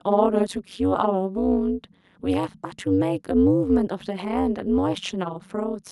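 From start to finish the speech carries overlap-add ripple. The audio was split into windowed frames and rejoined with an overlap whose windows fail to sum to a steady gain, so the level dips once per frame, here around 200 times a second and by about 60 dB. That gives a harsh, metallic buzz with extra tones around each note. Unlike added hum, the buzz exists only where the speech does and vanishes in gaps, because it modulates the signal rather than adding a tone.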